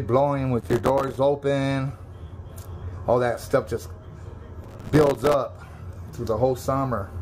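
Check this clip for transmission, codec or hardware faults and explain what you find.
Two bursts of processor overload crackle, at 0.61 to 1.17 s and 4.64 to 5.34 s. The processor repeatedly failed to fill its tiny audio buffers in time, leaving short silent gaps, which fits buffers of around 3 ms. Dozens of hard-edged dropouts in quick succession produce a gritty tearing over the sound.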